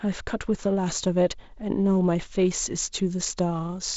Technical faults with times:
none

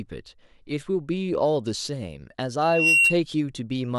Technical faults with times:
2.61-3.17 loudspeaker feedback squeal

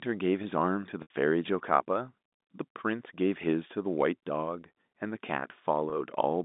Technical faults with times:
1.02-1.10 packet loss with pitch repetition
5.90-5.92 packet loss with pitch repetition

